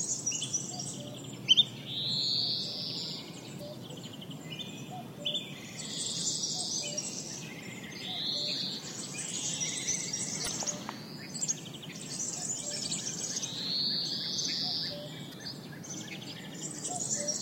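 Damaged data in a compressed stream occurs four times in this everyday-sound recording: at 3.57–3.61 s, 7.83–7.87 s, 10.44–10.48 s and 15.30–15.34 s. Each burst lasts about 44 ms. At these points the encoded bytes were lost or corrupted, so the decoder could not read those frames properly and had to resynchronise on the next valid frame header. Each one sounds like a brief chirp, squawk, click or short hole that breaks into the sound.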